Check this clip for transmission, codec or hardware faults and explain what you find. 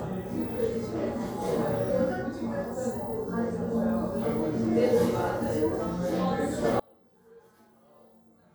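One fault is present. From 6.80 s to the end at 8.55 s, the sound suddenly collapses to a faint remnant, about 34 dB quieter than before, with everything the channels share almost gone. This is likely one channel inverted: with one side's polarity reversed, everything the two channels share cancels when they are summed to mono, leaving only the difference between them.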